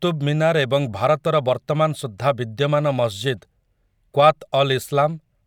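No technical faults are audible anywhere in the speech recording.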